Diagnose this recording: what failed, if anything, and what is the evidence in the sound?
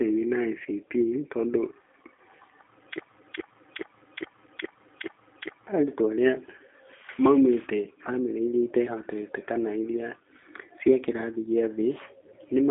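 The codec stage did damage throughout: the speech went through a G.729 codec at 8 kbit/s, which rebuilds each 10 ms frame from a vocal tract filter, a pitch predictor and a few pulses. The result sounds rough and synthetic, confined to about 250 Hz to 3.5 kHz, with nothing above 3.6 kHz.

A broken-record loop runs from 3.00 to 5.67 s. A 0.42 s fragment repeats exactly, back to back, six times before "arutwo aria" follows. The likely cause is a stalled player or stream resending its last held fragment, so the audio due in that span is lost.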